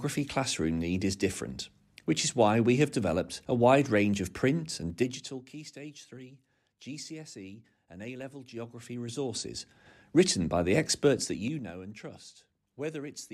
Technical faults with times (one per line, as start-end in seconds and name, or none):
4.84-5.56 zipper noise
11.20-11.76 zipper noise